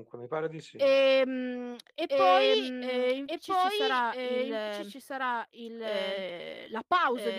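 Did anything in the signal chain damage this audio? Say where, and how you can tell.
Yes. A doubled audio track runs through the whole speech clip: a second, full-band copy of the speech trails the original by about a second and a half, roughly 5 dB quieter. It is most likely a second, slower capture path into the mix, such as a monitoring loop or buffer route. Unlike acoustic echo or reverb, the copy comes once, with no decay tail and no room colour, so it is a digital duplicate rather than a reflection.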